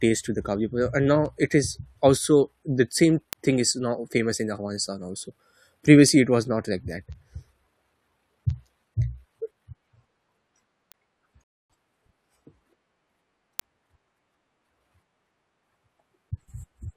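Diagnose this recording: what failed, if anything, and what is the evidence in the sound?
Word clock ticks point to a digital interface stage: from 0.22 s to 16.70 s, sharp ticks of uneven strength recur roughly every third of a second, around fifty in all. An unlocked receiver clock, about 70 ppm off, slips one sample per tick. The steady rate separates this from random dropouts.

A rebuffering stall points to playback: at 11.44 s the speech cuts to silence for about 0.26 s, then resumes exactly where it stopped. The player ran dry waiting for data. Unlike a dropout, nothing is missing; only 260 ms is added.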